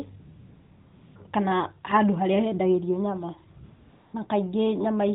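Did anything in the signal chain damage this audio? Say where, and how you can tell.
Yes. AMR comfort noise in the codec: at 0.2–1.16 s and 3.64–4.14 s the real background switches to smooth, steady hiss, because speech frames stopped and the receiver synthesised filler.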